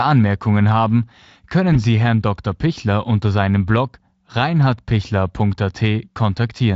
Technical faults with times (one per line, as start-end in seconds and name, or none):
1.73-1.82 VoIP packet loss concealed by the speech codec